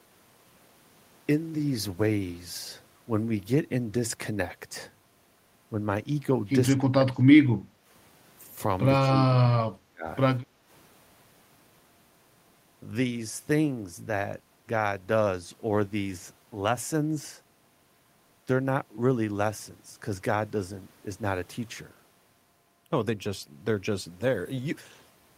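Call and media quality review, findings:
Speech suppressed in double talk, 6.72–7.25 s and 9.13–10.06 s: near talker dips in pieces, down roughly 25 dB and then roughly 35 dB, over about half a second and then most of a second. Likely echo canceller suppression while both ends talk. The talker's own speech is attenuated, not just the room bed.

Background gated by the echo canceller, 7.64–7.86 s and 10.43–10.68 s: room noise drops by about 8 dB for 0.2–0.3 s while the far end plays, then recovers. The canceller clamps the mic during loudspeaker output.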